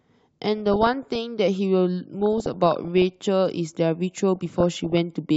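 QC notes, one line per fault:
0.58–1.18 s, 2.20–3.16 s, 4.36–4.98 s: DAB burbling. Burbling noise sits over the speech. Bit errors of about half a percent, and about 0.7 percent in the last burst, slip past error correction, so noise blips hit single sub-bands and wrong scale factors make sub-bands jump in level for up to a frame.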